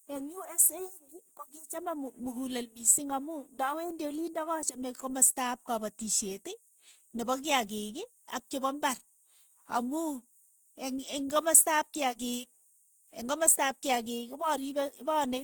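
Throughout, the speech sounds grainy and rough rather than swirly like MP3, with content up to 20.2 kHz. This points to likely Opus compression, fitting roughly 24 kbps.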